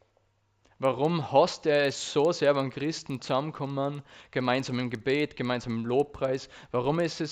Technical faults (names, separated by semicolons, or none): resampler restarted on every block